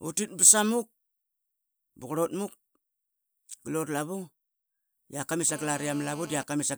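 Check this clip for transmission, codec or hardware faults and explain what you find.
Two interference faults from a nearby mobile phone appear near the end of this speech clip.

GSM phone buzz, 5.49 to 6.43 s, right after "rak kamit": a 2G handset in an active call keys its transmitter about 217 times per second, and the audio circuitry rectifies each radio pulse into a small voltage step. The result is a hard, raspy 217 Hz buzz, rich in harmonics and unrelated to the speech, sitting at about 19 dB below the signal and holding steady for nearly a second.

GSM signalling bursts, 6.52 to 6.65 s: the phone is still in the call but its user has fallen silent, so it sends only short clusters of bursts instead of a continuous stream. The same rectification turns these into a brief run of even 217 Hz ticks, faint and well below the speech level, lasting about an eighth of a second.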